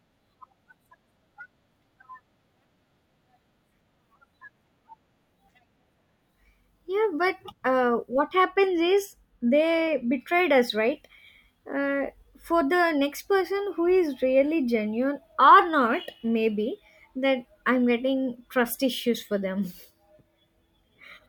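From 8.2 to 10.2 s the speech turns dull and muffled, a sign of de-emphasis applied wrongly: a treble-cut curve was applied to audio that did not need it. The response slopes smoothly downward, sitting about 8 dB lower at 10 kHz than at 1 kHz.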